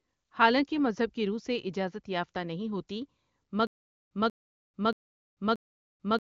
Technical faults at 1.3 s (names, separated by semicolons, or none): none